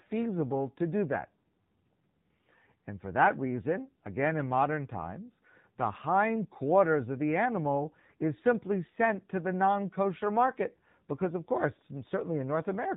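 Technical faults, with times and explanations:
Throughout, AMR narrowband mobile codec: the speech is cut off sharply at 4 kHz, with nothing above that band, and the voice carries a buzzy, synthetic edge that is plainly audible. The damage fits one of the lower AMR-NB modes, around 7.4 kbps, where a vocal-tract model is driven by only a few pulses per subframe. That artificial texture is what separates it from a plain telephone-band filter, which would dull the highs but leave the voice natural.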